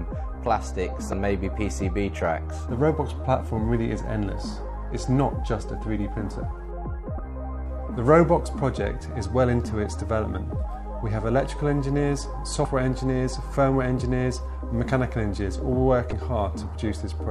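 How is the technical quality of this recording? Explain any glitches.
Technical quality is marred by four brief glitches from damaged data in a compressed stream, at 1.10–1.13 s, 7.16–7.19 s, 12.62–12.65 s and 16.09–16.13 s. Each is a roughly 30 ms chirp or blip where corrupted frames are misdecoded before the decoder resynchronises.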